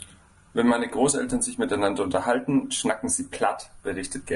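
From start to finish the speech sounds rough and grainy, with a hazy, noisy texture between the pitch harmonics. This is likely low-delay AAC compression (AAC-ELD), whose short frames blur harmonic detail. The plainly audible damage fits a bitrate around 32 kbps.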